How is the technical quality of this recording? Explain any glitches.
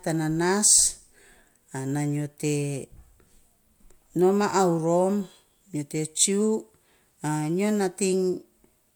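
No glitches are audible anywhere.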